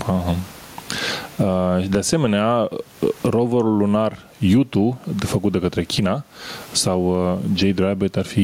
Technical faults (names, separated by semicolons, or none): gain pumping